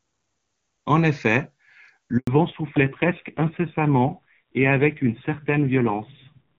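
At 2.17 s a handover gap occurs: the call switches networks, speech frames stop arriving, and the sound drops to silence for 100 ms until 2.27 s. From 2.27 s to the end comes a fallback to narrowband: the link leaves the clear-sounding HD Voice codec for an older narrowband coder, so everything above 4 kHz disappears and the speech turns dull and rough, which fits a low-rate mode.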